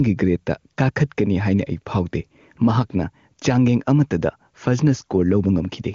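Throughout the speech, the level breathes, swinging by around 5 dB, so loud and quiet passages sit squashed close together. That is gain pumping, likely from input gain set too high with a fast limiter or compressor clamping down on every loud sound. Unlike a noise gate, pumping rides the gain up and down rather than cutting to silence. The wideband phone band, with nothing above about 7.4 kHz, stays clean, which fits a high-rate HD Voice setting.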